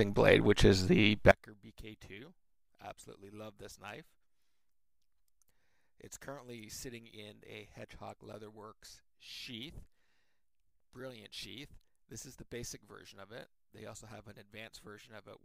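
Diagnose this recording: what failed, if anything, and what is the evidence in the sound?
From 1.31 s to the end, the sound drops by about 25 dB. The centre of the image nearly disappears. What remains is faint and sounds like only the difference between the channels. This is the signature of one channel inverted. The likely cause is a polarity swap in the analogue wiring of one channel. When the two channels are summed, everything common to both cancels.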